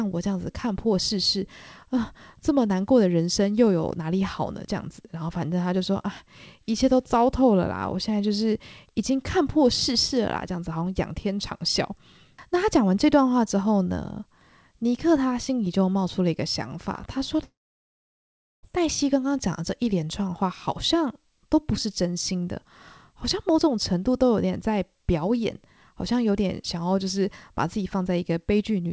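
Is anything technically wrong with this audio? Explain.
Yes. From 17.44 to 18.66 s the sound breaks off in what is likely a long network dropout. About 1.2 s of audio never arrived. The receiver smeared the last sound into a fading buzz or hiss, then left roughly 1.1 s of silence before the speech resumed further on. The band stops at 8 kHz, which fits the G.722 call codec.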